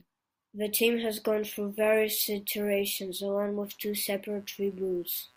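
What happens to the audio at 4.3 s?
At 4.3 s a faint, gritty buzz runs under the speech, pulsing at around 150 times a second and sitting roughly 35 dB below it. This is computer activity noise, starting at 3.64 s, just after "through various iterations along", and lasting to the end of the clip. Shifting load on the computer's processor or graphics hardware disturbs the ground the audio circuit shares, so the buzz follows the machine's activity rather than the speech.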